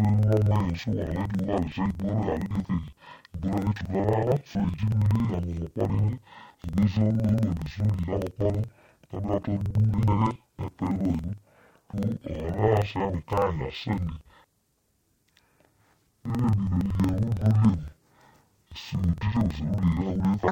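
Throughout, interleaved audio read as planar halves each 46 ms block, so speech sounds an octave low, doubled and choppy; the spectrogram shows harmonics compressed downward, with seams every 46 ms.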